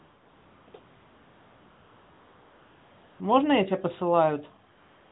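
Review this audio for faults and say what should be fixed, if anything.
AMR comfort noise kicks in four times: 0.00 to 0.68 s, 0.70 to 0.74 s, 0.80 to 3.20 s, and 4.72 s to the end. The sender judged these stretches silent and stopped sending speech frames. The receiver then filled the gaps with smooth synthetic noise, which swaps in and out against the real background. To prevent it, switch off discontinuous transmission on the sending side or make its voice detection less eager to call silence.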